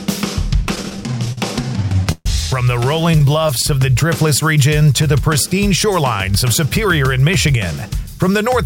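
Packets arriving late kept draining the jitter buffer, causing repeated stalls (stutter). From 0.68 to 2.26 s there are 17 gaps, the longest 137 ms, filling about a fifth of that stretch. From 3.11 to 3.64 s there are six brief ones. Each gap stretches the last sound onward, so the audio drags and hiccups while nothing is lost.

From 5.94 to 7.54 s the buffer had overfilled, and a jitter buffer speed-up trimmed short pitch-period pieces, about a tenth of a second in all. The audio runs at 106% speed at unchanged pitch and sounds slightly hurried.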